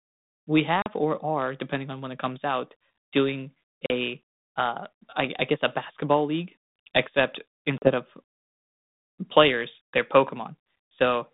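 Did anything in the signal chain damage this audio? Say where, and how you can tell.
Yes, at the network stage: packet loss on an ADPCM call, heard at 0.82 to 0.90 s, 3.86 to 3.92 s and 7.78 to 7.92 s. Each time about 40 ms of audio, roughly a couple of packets, drops out as a hard-edged hole of silence. Because G.726 at 32 kbit/s sends only differences from an adaptive prediction, the receiving decoder's predictor and step size lose track of the sender's. The speech then comes back with brief distortion until the two re-converge.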